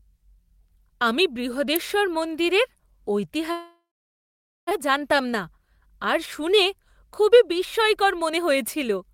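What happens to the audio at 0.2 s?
Nothing goes wrong at 0.2 s; the audio plays through that moment intact, with no dropout, click or distortion.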